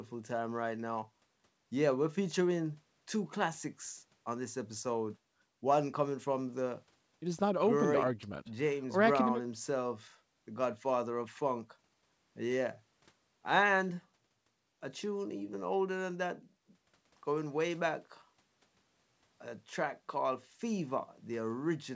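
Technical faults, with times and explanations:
No technical faults can be heard anywhere in this speech.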